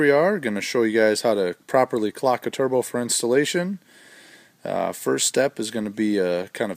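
No technical faults can be heard.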